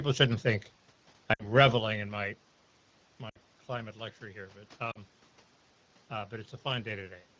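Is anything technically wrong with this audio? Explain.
Yes, there are lost AMR speech frames at three points: 1.33 to 1.47 s, just after "shouldn't think" and before "reveling in my"; 3.29 to 3.38 s, just before "climate luxury here"; and 4.92 to 4.98 s. Each gap is 40 to 60 ms, which fits two or three 20 ms frames failing their check. The wideband decoder repeats the last good pitch and vocal-tract shape at falling gain, so the sound drops to near silence within two frames, then the voice comes back weak or rough for a moment. Unlike a plain dropout to silence or a click, these gaps begin with a short, fading continuation of the preceding sound.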